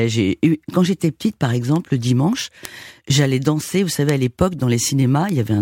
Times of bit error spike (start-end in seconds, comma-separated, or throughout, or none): 1.76, 2.65, 4.09, 5.29